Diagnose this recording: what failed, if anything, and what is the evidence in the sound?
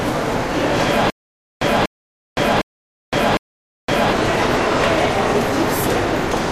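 Stutter with silent gaps, 1.1 to 4.13 s: one 0.24 s burst repeats four times between 0.51 s silences, likely a stalled playback buffer. A plain dropout wouldn't repeat the burst.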